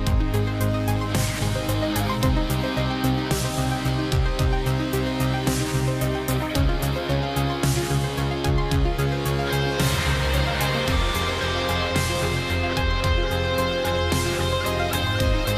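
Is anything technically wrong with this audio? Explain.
No, nothing technically wrong stands out here; it all sounds just as it should, with no glitches or problems to point to.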